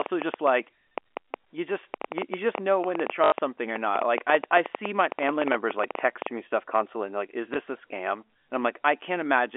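From 0.02 s to 6.28 s a train of clicks ticks over the speech and pauses, ending just before "me stuff constantly and". There are roughly fifty clicks at an irregular pace of about 8.2 per second, and they peak well above the speech, about 15 dB over it. The likely cause is interference or a faulty connection or power supply. On a waveform they show as thin, similar spikes. On a spectrogram they appear as full-height vertical lines up to the 3.4 kHz top of the G.711 telephone band.

Packet loss with last packet repeated occurs at 1.43 s (one 20 ms packet), 3.24 to 3.32 s (80 ms, four packets), and 7.54 to 7.56 s, between "constantly and like is" and "a scam". The longer run buzzes robotically at 50 Hz, showing as a repeated waveform segment and vertical striping.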